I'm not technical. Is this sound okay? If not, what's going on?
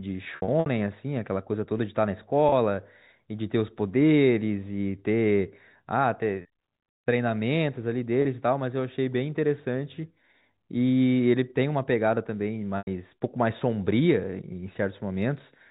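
No. The speech briefly snags into a held, buzzy tone at 0.36 to 0.66 s, 2.49 to 2.52 s, 6.42 to 6.45 s, 8.22 to 8.25 s and 12.78 to 12.87 s. This is packet loss with pitch repetition: small chunks of audio went missing, and the receiver repeated the last sound to cover each gap.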